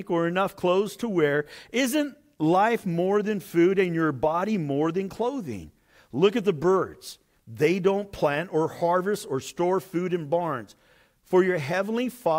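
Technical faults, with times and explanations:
Nothing to flag here; the speech comes across without any technical faults.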